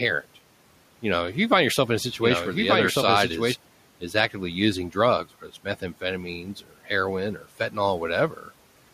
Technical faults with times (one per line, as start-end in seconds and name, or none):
0.00-3.54 doubled audio track
7.39-7.75 speech cut by the noise suppressor